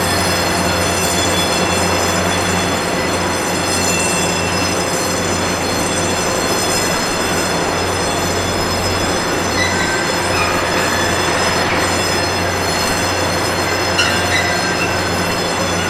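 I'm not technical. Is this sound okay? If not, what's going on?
Yes, nothing wrong here.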